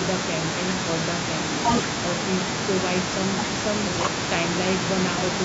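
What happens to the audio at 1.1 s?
Nothing goes wrong at 1.1 s: the speech there is intact, carried through the call's microphone processing without any fault at that point.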